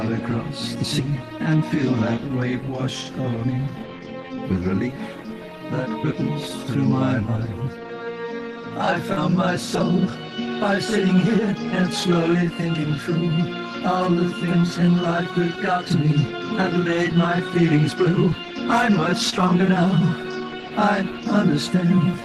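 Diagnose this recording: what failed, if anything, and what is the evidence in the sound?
Short concealed packet loss at 9.13 to 9.19 s and again at 19.30 to 19.34 s, a network-stage failure. About 40 ms and then 20 ms of audio arrived too late, so the decoder extended the preceding sound to bridge each gap before blending back, leaving a brief smear or wobble.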